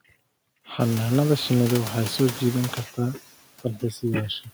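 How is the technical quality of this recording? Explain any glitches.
The recording carries two related faults from noise suppression, one running through the whole clip and one brief loss of speech near the end.

Noise suppressor artifacts are present throughout. The suppressor estimates the steady background in each frequency band and pulls those bands down frame by frame, here by about 17 dB. Between phrases the room noise sinks, then swells back under the talker. On a spectrogram the noise floor shows as a blotchy, shifting haze instead of an even band. The room noise itself jumps by about 21 dB at around 1 s.

Speech cut by the noise suppressor occurs from 3.62 to 4.03 s, right after "waxay soo jiidan kartaa". The suppressor mistakes some of the quieter speech energy for background and turns it down with the noise, by as much as about 15 dB, over roughly 150 ms within that span. Those sounds come across as swallowed and faint. 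In the waveform the envelope dips, and the spectrogram shows the weaker speech energy thinned out or missing.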